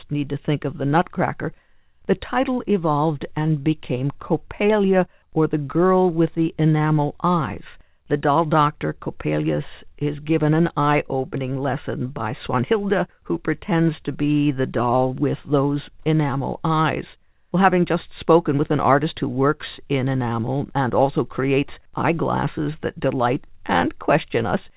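Speech, with no technical faults to report.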